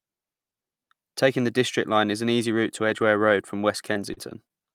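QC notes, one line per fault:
2.89–4.51 s, scattered short gaps: right after "an easy route to", about four brief dropouts, the longest around 40 ms. The receiver papered over each by stretching the previous sound, so you get little ticks and smears across roughly 7% of that stretch.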